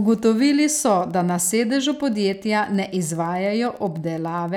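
Speech carries Wi-Fi interference throughout: a faint ticking every 102.4 ms, about ten times a second and roughly 40 dB below the voice. A nearby radio's beacon is rectified by the audio circuit. It appears as evenly spaced thin vertical lines on a spectrogram, or tiny regular spikes on the waveform.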